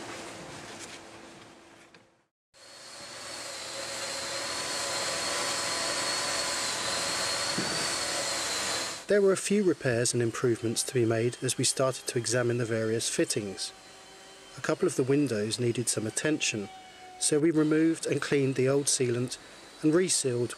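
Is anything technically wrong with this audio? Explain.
No, there are no technical faults to report in this audio.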